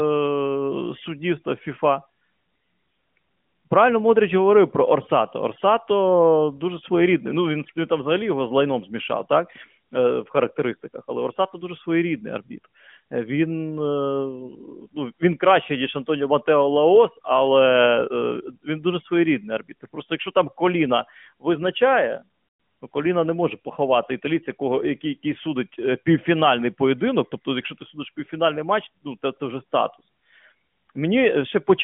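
At 22.48 to 22.60 s there's a burst of lost AMR speech frames, about 120 ms, which fits six 20 ms frames. The decoder stretches the last good sound and fades it out, so it smears, dips, then returns a bit rough over the band-limited narrowband line.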